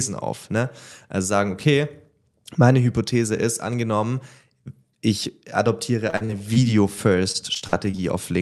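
From 6.07 to 6.58 s, and again from 7.32 to 8.0 s, the speech turns choppy and robotic. This is repeated packet loss. Short holes, none longer than about 45 ms, keep recurring. Each is patched by stretching the previous sound, which covers roughly a quarter of each span.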